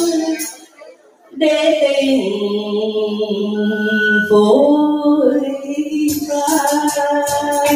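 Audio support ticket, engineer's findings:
Noise suppressor applied to music or sounds, throughout. A speech-tuned suppressor is left in the chain and treats sustained tones, ambience and decays as noise. Level swings by around 10 dB, so held material pumps and thins while attacks pass.

Sound cut by the noise suppressor, 0.52 to 1.37 s. The suppressor misreads this sound as noise and attenuates it, by about 18 dB at the deepest point. Roughly a second is affected, with the sustained and fading parts sinking hardest.

Loudspeaker feedback squeal, 3.54 to 4.46 s. A single 1.5 kHz tone swells over about half a second and peaks roughly 5 dB above the programme. The mic is picking up its own monitor, and loop gain exceeds unity at that frequency.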